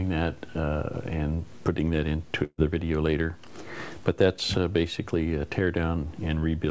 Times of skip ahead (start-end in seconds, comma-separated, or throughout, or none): none